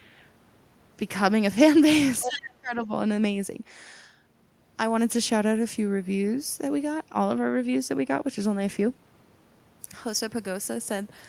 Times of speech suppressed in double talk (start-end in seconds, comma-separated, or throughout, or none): 2.24-2.90